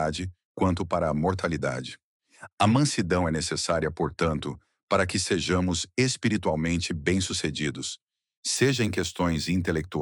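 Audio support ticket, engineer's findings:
Imaging from linear upsampling, 8.56 s to end. Faint metallic shimmer on bright content, dulled top end. Likely a straight-line interpolator in the rate converter. Fits a 24 kHz source raised to 44.1 kHz. Mirror images sit between 12 kHz and 24 kHz, roughly 30 dB down.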